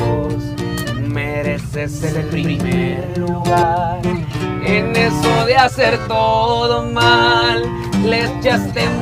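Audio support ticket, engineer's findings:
Doubled audio track, 2.01 to 3.63 s. Second full-band copy trails the original by about 100 ms at roughly equal level. No decay, no room colour; onset and cutoff abrupt. Probable component: likely a slower parallel capture path or misaligned edit layering two copies. Waveform: every transient repeated once, about 100 ms later, same height. Spectrogram: onsets smeared into paired vertical edges, full bandwidth, starting and stopping sharply at the segment boundaries.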